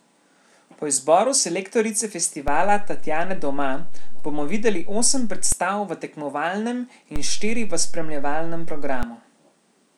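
At 2.48 s, right after "izboru selektorice", there's a DC step: the waveform's zero line jumps by about −16 dBFS, thumping in and out again at 5.52 s before "v tekmovalnem". After "v tekmovalnem" it recurs, about −15 dBFS, from 7.16 to 9.03 s, each shift a low thump under unchanged speech.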